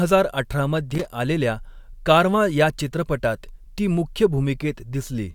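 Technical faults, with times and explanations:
0.91–1.06 s: loose connector crackle, a worn contact making and breaking intermittently, chopping the speech into a short irregular burst of scratchy crackle.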